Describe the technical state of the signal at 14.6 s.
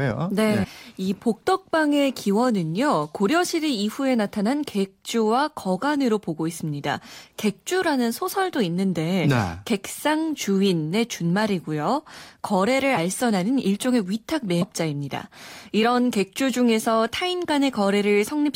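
At 14.61 s, compressed frames are skipped: about ten frames of roughly 23 ms are never decoded, so the speech jumps ahead about a fifth of a second, joined by a brief smeared blip.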